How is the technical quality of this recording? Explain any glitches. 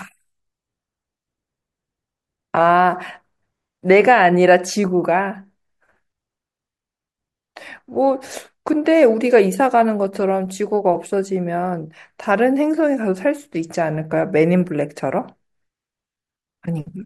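The recording has no technical faults to report. Nothing in the audio breaks, drops out or glitches at any point, so there is nothing to explain.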